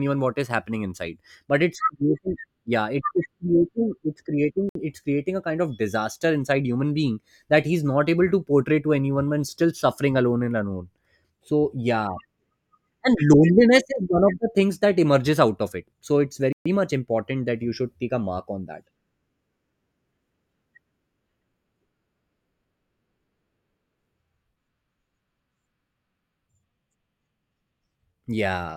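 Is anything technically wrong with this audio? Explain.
Yes, the speech cuts out twice in what sounds like a Bluetooth stall: at 4.69 to 4.75 s, after "creating it's" and before "it's creating a kind", for about 61 ms, and at 16.53 to 16.66 s, after "of it so it's" and before "much important that you", for about 130 ms. The likely cause is interference delaying wireless packets, so the headphone buffer empties and playback pauses until resent data arrives. What sets this apart from a codec glitch is that each gap is clean silence rather than a burst of noise or a smeared, warbling patch.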